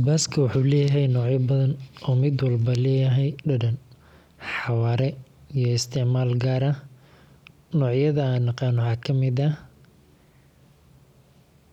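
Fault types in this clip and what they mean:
CD scratch ticks: A scratch on the disc corrupted more data than error correction could rebuild on successive rotations, so the player patched or muted those samples, leaving three brief ticks between 8.51 and 9.04 s, each a fraction of a millisecond long.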